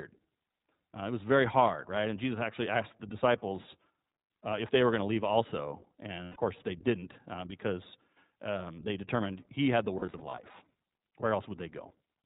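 The speech runs through an iLBC codec for its whole length. Nothing above 4 kHz survives, and the coding damage is plainly audible as a rough, slightly synthetic texture. That fits iLBC's 15.2 kbps mode, which codes each 20 ms frame independently.

Lost iLBC frames interrupt it twice. From 6.24 to 6.37 s, just after "going to leave also" and before "course they didn't uh", 120 ms goes missing, consistent with six consecutive frames. The decoder fills the gap by repeating the last pitch cycle blended with noise, so it sounds like a held, buzzy vowel. From 9.98 to 10.39 s, after "determined he had the", 180 ms of loss is scattered across about 400 ms in short runs, the longest around 40 ms. The result is a string of brief buzzy patches. Because each iLBC frame decodes on its own, the speech comes back cleanly right after each gap.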